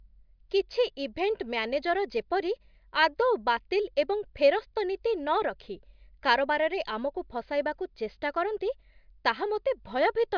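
No technical faults are audible.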